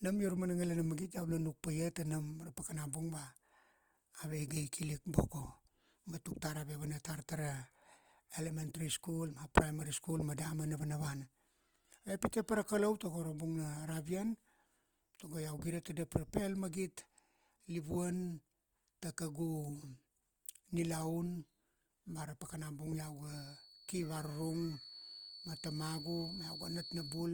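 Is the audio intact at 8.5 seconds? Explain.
No. Throughout the clip, including 8.5 s, the speech sounds rough and grainy. Likely Opus compression in CELT mode, where starved bands are filled with noise, consistent with roughly 24 kbps. Content reaches 20.2 kHz.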